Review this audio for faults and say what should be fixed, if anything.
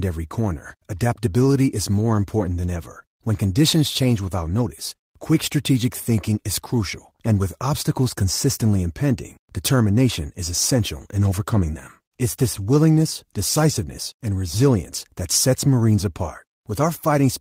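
No faults were heard, so nothing needs fixing.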